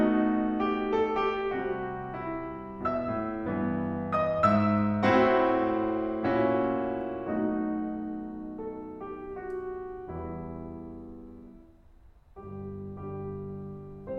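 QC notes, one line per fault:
No faults heard in this music clip.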